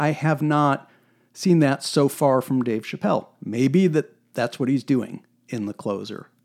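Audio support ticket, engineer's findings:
Periodic USB or driver dropouts: regular ticks in speech every 1.0 s, 0.65 to 5.6 s. A fraction of a millisecond skipped each time. Bus or driver stalled by a background task.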